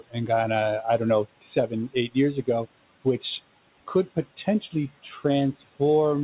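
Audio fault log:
1.41–1.71 s and 4.37–4.73 s, speech cut by the noise suppressor: the suppressor mistook parts of the speech for the room noise, which sits about 21 dB below the speech, and pulled them down by about 17 dB and about 11 dB. In each window roughly a tenth of a second sounds swallowed. The waveform envelope dips there, and on a spectrogram the speech energy thins toward the background floor, which ends at the 4 kHz G.711 band limit.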